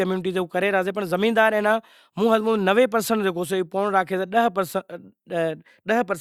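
Speech, with no audible technical faults anywhere in the recording.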